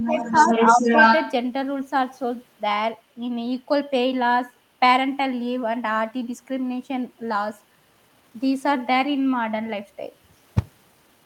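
From 0.0 to 1.33 s, the echo canceller likely failed to remove the loudspeaker signal from the microphone, so the other side's voice is leaking through, sitting a little louder than the talker's own speech, a second voice running under and over it.

Within that stretch there are two dips from speech suppressed in double talk, likely because the canceller could not tell the near talker from the echo and turned everything down. From 0.0 to 0.51 s the talker drops by roughly 10 dB. From 0.74 to 0.86 s a shallower dip follows, only a few decibels.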